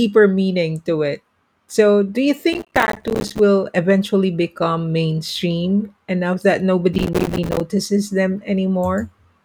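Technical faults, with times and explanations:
2.53–3.39 s and 6.93–7.61 s, processor overload crackle: a gritty, tearing crackle rides on the speech right after "do you" and again after "become mainstream enough that". The processor repeatedly missed deadlines on short buffers of a few milliseconds, leaving dozens of hard-edged silent gaps in quick succession.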